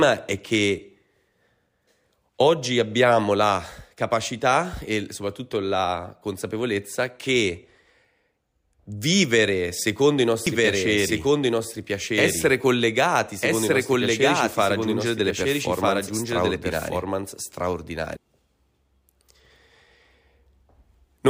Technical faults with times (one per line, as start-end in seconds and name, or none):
10.47-18.17 doubled audio track